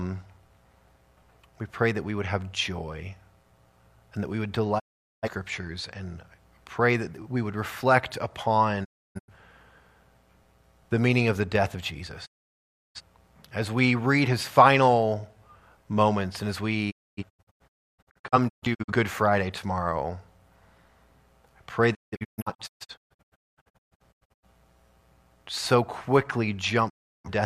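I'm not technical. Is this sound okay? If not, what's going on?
No. The audio has six digital broadcast dropouts, at 4.78, 8.83, 12.25, 16.90, 21.93 and 26.88 s. Each time, the receiver stopped getting clean data, faded the sound out over 20 ms, and stayed silent until good data returned. The gaps at 4.78, 12.25 and 26.88 s are single holes lasting 0.34 to 0.68 s. Those at 8.83, 16.90 and 21.93 s break into several short holes, the last spread over about 2.5 s. Whatever was broadcast during these gaps is lost.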